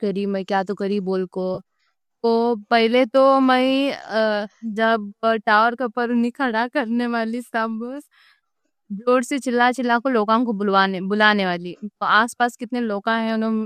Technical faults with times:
1.54-1.60 AAC frame loss with concealment

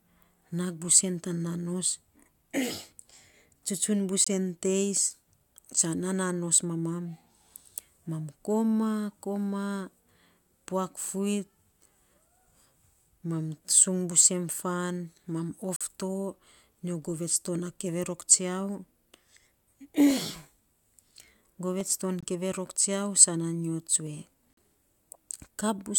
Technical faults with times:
0.85 dropped samples
4.24-4.28 corrupt frame muted
10.98 dropped samples
14.12 dropped samples
15.76-15.81 corrupt frame muted
20.11 dropped samples
21.81 dropped samples
22.21-22.24 corrupt frame muted
24.07 dropped samples
24.53-24.57 corrupt frame muted

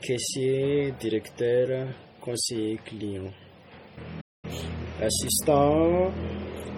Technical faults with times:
0.00-6.78 transcoding between lossy codecs
4.20-4.45 playback stall
4.45-5.93 time-compressed catch-up

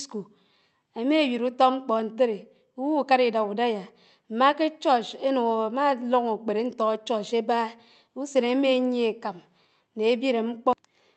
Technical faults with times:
none

